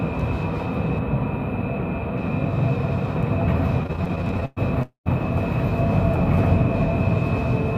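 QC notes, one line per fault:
0.98–2.18 s, channel delay (comb filtering): One channel runs a few samples behind the other, about 0.07 ms, and the two are summed to mono. Content common to both channels cancels at evenly spaced frequencies, with the first notch around 7 kHz and the rest at regular intervals above it. The top end loses air and sounds hollow and phasey, while the low and mid range stay intact.
3.83–4.59 s, repeated stalls (stutter): Across this span the playback stalls 18 times, with the longest wait lasting 111 ms. Packets reached the receiver late or more slowly than they were played out, so the jitter buffer ran dry again and again. Each time the receiver stretched the last sound to bridge the wait. About 313 ms is filled this way, roughly 42 percent of the span, and nothing is lost. The result drags and stutters instead of dropping out.
4.83–5.08 s, call audio freeze: The audio holds on its last sound, which then fades. 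About 130 ms of the stall is silent, and 231 ms in total is filled before playback resumes from where it stopped. Nothing is missing, but the rest of the clip now arrives 231 ms later. The likely cause is packets held up in transit until the jitter buffer emptied, with the receiver concealing the wait until data resumed.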